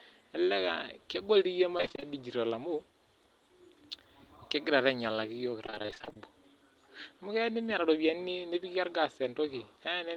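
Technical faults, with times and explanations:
1.77–2.04 s and 5.66–6.19 s, repeated packet loss (robotic sound): audio packets kept going missing or arriving late, and each hole (the longest 23 ms, then 28 ms) was filled by stretching the previous sound. Nearly half of each stretch is patched, so the speech turns choppy and robotic.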